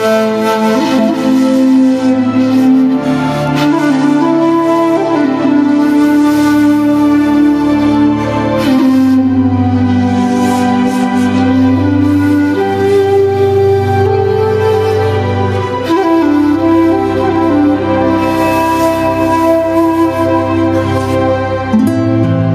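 Gain pumping runs throughout: the gain swings by around 10 dB, likely from excessive gain driving a fast limiter.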